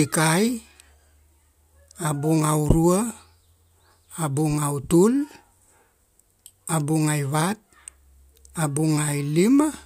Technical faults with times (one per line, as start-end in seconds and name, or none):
none